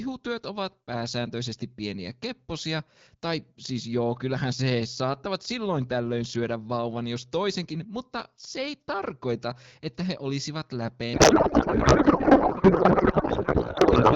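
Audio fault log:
11.13 to 14.15 s, codec payload misread: right after "tarkoita että he olisivat", the speech turns into garbled noise and warble that barely tracks it, until the clip ends. Octet-aligned AMR frames are being parsed as bandwidth-efficient, so every field is read from the wrong bits.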